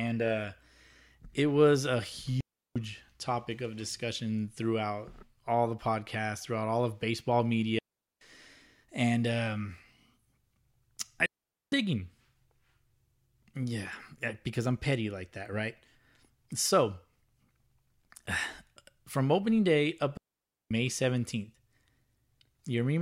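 The speech cuts out four times in a digital wireless dropout: at 2.41 to 2.76 s (0.35 s), 7.79 to 8.21 s (0.43 s), 11.26 to 11.72 s (0.46 s) and 20.17 to 20.71 s (0.54 s). Each time, the receiver lost too much of the data stream and muted, leaving a clean hole of near silence with only a very short fade. Unlike an analogue wireless dropout, there is no hiss or noise burst on either side of the gap.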